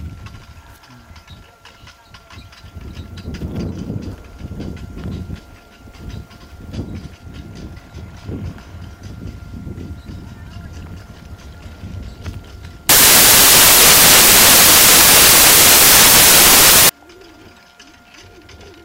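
From 12.89 to 16.89 s the audio becomes loud, harsh broadband noise: samples built from the wrong bytes, with low bits promoted to high bits.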